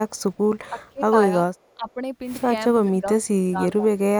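From 0.69 to 1.13 s the speech dips by about 20 dB in patches, likely speech suppressed in double talk. The canceller turns down the talker's own voice rather than adding anything. At 0.85 s, inside that dip, and again from 1.67 to 1.91 s, a faint copy about 40 dB down trails the speech by 412 ms. This is likely echo leak: a delayed repeat, not a loss. Further double-talk dips follow at 1.75 to 2.0 s (about 15 dB), 2.85 to 3.06 s (a slight 5 dB) and 3.24 to 3.87 s, the deepest at about 25 dB.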